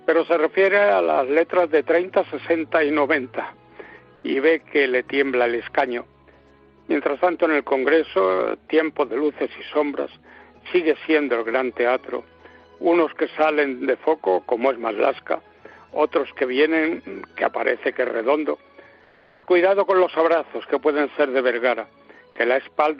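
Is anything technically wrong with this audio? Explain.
Yes. Comfort noise in place of the background appears twice: briefly from 4.15 to 4.23 s (80 ms) and longer from 19.03 to 19.47 s. In each pause the real background, about 35 and 37 dB below the loud parts, gives way to a smoother, featureless noise, about 4 dB and about 2 dB quieter. The likely cause is Opus discontinuous transmission, where the sender goes quiet and the receiver synthesises shaped noise. Unlike a gate or dropout, the pause never falls to silence.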